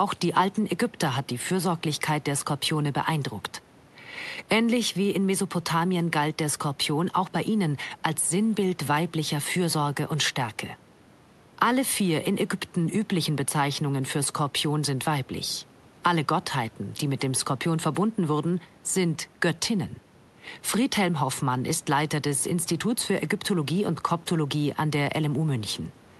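No technical faults are audible.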